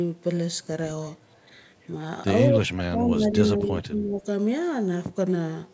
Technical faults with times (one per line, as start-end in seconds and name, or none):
2.49-4.20 speech suppressed in double talk